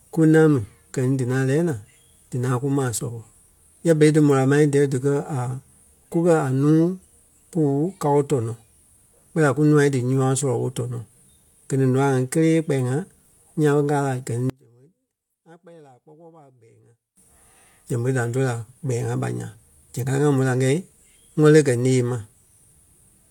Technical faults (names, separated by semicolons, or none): one channel inverted